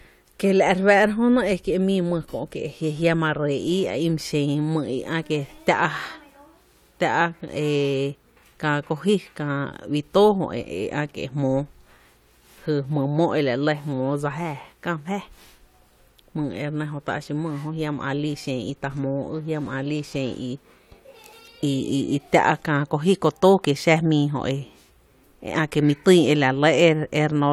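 No audible technical faults in the recording; nothing in it calls for correction.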